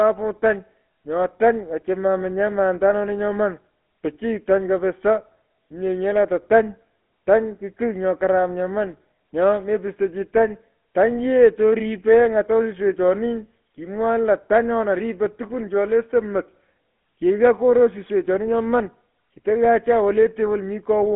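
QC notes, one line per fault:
Throughout, GSM full-rate codec: the speech has a plainly audible buzzy, gravelly roughness, and nothing reaches above about 3.8 kHz, with the band sitting roughly within 200 to 3400 Hz like a phone line. The coder models the vocal tract and drives it with a sparse train of regularly spaced pulses, discarding most of the excitation detail. That coarse excitation produces the grit. The character fits a 13 kbps GSM full-rate coder.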